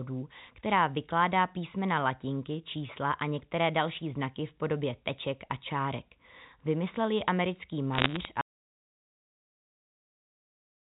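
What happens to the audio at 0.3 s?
Nothing goes wrong at 0.3 s: the speech passes through intact, carrying only the narrow band of G.711 telephone coding, with nothing above 4 kHz and at most a faint noise that follows its level.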